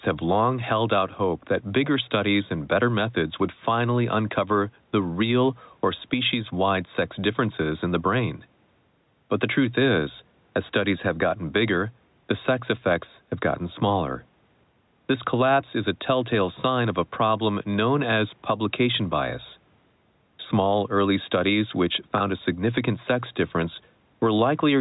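Speech recorded through a call path, with two faults. Gain pumping runs through the whole clip. The gain swings by roughly 5 dB. This flattens the dynamics and gives a squeezed quality. The likely cause is input gain set too high, so a fast limiter clamps down on every peak. At 22.18 to 22.20 s, just after "early studies which", there is a packet loss with pitch repetition. The last pitch period is repeated for about 20 ms, heard as a brief buzzy hold, which fits one dropped 20 ms packet.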